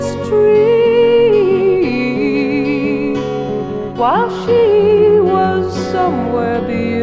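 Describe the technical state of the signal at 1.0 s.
At 1.0 s the signal is intact, with no dropout, distortion, glitch or other fault audible at that moment.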